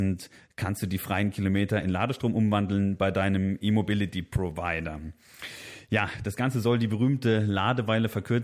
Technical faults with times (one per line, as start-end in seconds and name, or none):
none